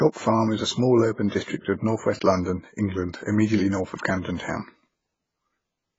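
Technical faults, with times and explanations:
Throughout, AAC compression: the speech sounds heavily dull and smeared, with warbling vowels and fizzy sibilants, likely from AAC-LC coding at a bitrate that fits about 16 kbps. A spectrogram shows a hard ceiling at 7.5 kHz and blotchy, smeared energy beneath it.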